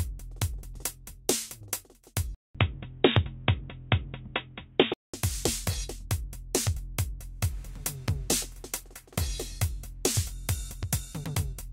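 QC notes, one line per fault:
2.35–5.14 s, input switched to a poorer device (likely): audio loses everything above 3.8 kHz, level shifts about 5 dB, new noise roughly 45 dB down, 200 ms silence at switch.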